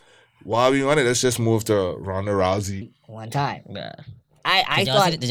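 At 2.82 s the speech jumps into a section at the wrong speed that runs to the end, playing 1.28 times too fast. Pitch rises by about four semitones along with it, so everything sounds high and rushed, likely from being played back against the wrong clock.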